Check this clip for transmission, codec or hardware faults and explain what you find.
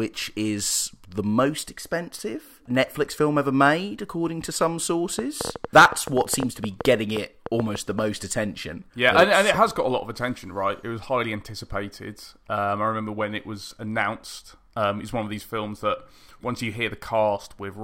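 There's one clear fault, a train of clicks running from 5.19 to 8.00 s, right after "made according to some". You get roughly twenty sharp, similar-sounding ticks at about 8.2 per second, spaced unevenly, and they poke well above the speech level, so they're obvious even between syllables. That repeated pulse pattern is most likely electrical interference from nearby gear or a faulty connection or power supply, injecting the same spike over and over.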